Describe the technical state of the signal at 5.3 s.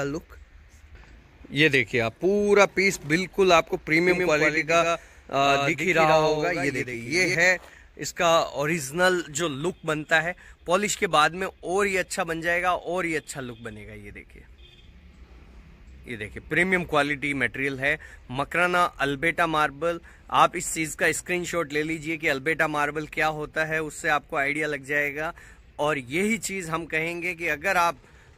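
At 5.3 s a doubled audio track runs from 4.09 to 7.35 s: a dry, full-band copy trails roughly 150 ms behind, about 5 dB quieter, likely from a second, slower capture path.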